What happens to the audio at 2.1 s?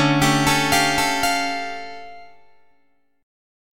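A second copy of the audio, likely from a slower capture path, runs throughout as a doubled audio track, about half a second behind and about as loud, so 2.1 s sounds echoed.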